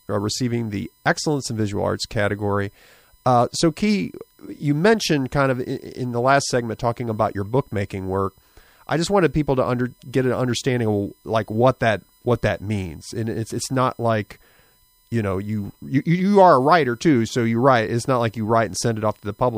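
Throughout the speech runs USB whine: 1 ms bus frames leak in as a fixed 1 kHz tone, strongest at 15 kHz, well above mains hum.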